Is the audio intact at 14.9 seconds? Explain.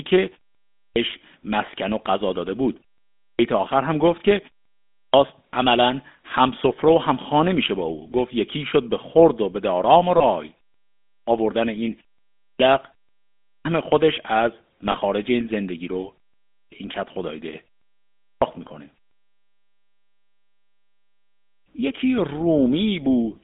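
No. Lost GSM frames hit from 14.92 to 14.95 s, a gap that fits one dropped 20 ms frame. The decoder repeats the last good frame, leaving a brief, rough metallic ring. The GSM full-rate codec also applies here. Its pulse-driven vocal tract model gives the speech a buzzy, gravelly roughness, band-limited to 200 Hz to 3.6 kHz.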